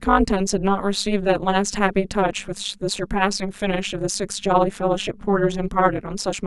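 Overlap-add ripple runs through the whole of this speech clip: the level dips and recovers at around 200 times a second, roughly once per frame, by about 60 dB, giving a harsh, metallic buzz with extra tones around the voice. The frames were windowed and rejoined with an overlap whose gains don't sum evenly.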